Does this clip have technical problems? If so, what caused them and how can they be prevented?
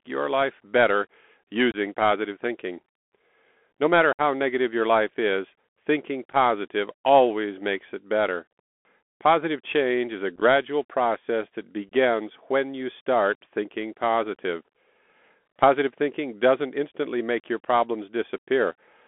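Yes. The speech passed through the Bluetooth CVSD headset codec, which encodes audio as one-bit up/down steps with an adaptive step size. Here that confines the sound to about 250 Hz to 3.4 kHz, makes s sounds scratchy, and leaves a granular hiss underneath. Using a wideband headset profile such as mSBC or LC3 would avoid it.

Unconcealed Bluetooth headset packet loss occurs at 1.71, 4.13, 6.30, 10.36 and 11.88 s. Short radio packets between headset and phone were dropped and replaced with silence rather than being concealed, leaving abrupt holes of about 30, 60, 15, 38 and 26 ms. The scattered gaps sound like brief crackle. Keeping the headset close to the phone and away from 2.4 GHz interference prevents this.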